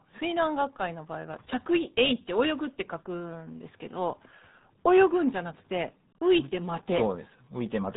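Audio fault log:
throughout: RealAudio 14.4 codec. The speech sounds muffled and gargly from start to finish. Nothing above 3.8 kHz survives, so consonants lose their edge and sibilants go dull. Heavy coding damage adds a watery, bubbling texture to vowels. The sound points to a very low bitrate, around 8 kbit/s, as used for dial-up streaming. The codec discards most spectral detail and rebuilds speech from a coarse model. The faint room noise, about 52 dB below the speech, is part of the recording.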